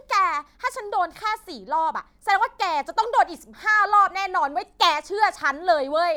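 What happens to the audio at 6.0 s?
Nothing goes wrong at 6.0 s; the audio plays through that moment intact.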